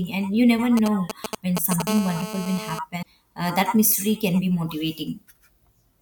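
From 0.77 to 1.82 s, right after "and you never", a galloping dit-dit-dit of short 217 Hz buzzes cuts across the speech, only a little quieter than the voice. These are GSM signalling bursts: a nearby 2G phone handling network signalling sends short groups of radio pulses at a 217 Hz rate, and the audio circuitry rectifies them into audible short buzzes.

From 1.87 to 2.79 s the intermittent pattern becomes a continuous, raspy buzz at 217 Hz, full of harmonics and unrelated to the speech, sitting about 10 dB below the voice. This is GSM phone buzz. The phone is now in a call and transmitting its bursts steadily 217 times a second, and the rectified pulses form an unbroken tone.

At 3.01 to 3.06 s the speech jumps ahead, and a chirp, a burst of noise or a short hole takes the place of about 48 ms of audio, roughly two 24 ms MP3 frames. The likely cause is a broken MP3 bit reservoir. Frames were lost, and the frame after the gap reached back into the reservoir for data it had stored earlier. 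It found bytes from a different frame and decoded garbage before the stream recovered.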